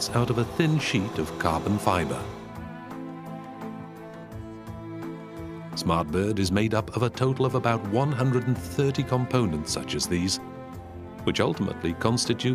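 At 10.85 s, repeated frames: a 46.4 ms compressed block, pointing to two frames, is decoded twice more, so the sound stutters and runs 92.9 ms longer.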